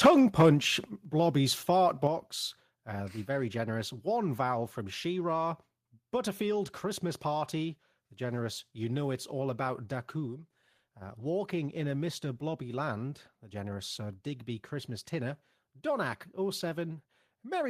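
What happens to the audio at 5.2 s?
Nothing goes wrong at 5.2 s: the speech plays through intact at that moment, with no dropout, click, distortion or other fault to be heard.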